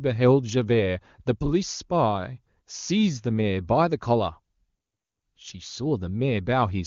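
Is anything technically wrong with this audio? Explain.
No, nothing is technically wrong with this speech: it carries the band-limited sound of the AMR wideband (HD Voice) codec at a high rate, where speech stays clear.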